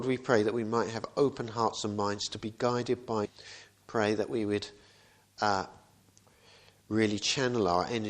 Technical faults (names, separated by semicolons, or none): stream segment skipped; CD scratch ticks